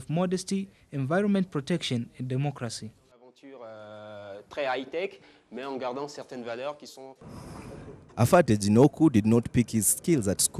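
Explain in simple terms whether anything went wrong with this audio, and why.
From 6.22 s to the end of the clip, pre-emphasis was left on. The treble was deliberately boosted, following the standard CD curve, but the matching cut that should undo it on playback never happened. So the sound turns thin, overly bright and harshly sibilant.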